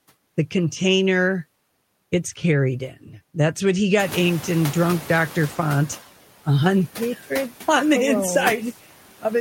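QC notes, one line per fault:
throughout: noise suppressor artifacts. The suppressor cuts steady background noise by about 12 dB. It works frame by frame, band by band, pulling down whatever it judges to be noise. So the background drops away in the gaps between phrases. It rises again under the speech, where the suppressor holds back to protect the voice. The result is a noise floor that pumps in step with the talking instead of staying level.
3.99–5.97 s: noise suppressor catching up. Around 4 s the room noise jumps by about 21 dB. The suppressor's noise estimate lags behind this sudden rise. At first the louder noise comes through with only about 6 dB of reduction. It then sinks gradually over 1.98 s as the estimate adapts. After that the room noise settles about 17 dB below the speech. That settled level is part of the room, not a system fault.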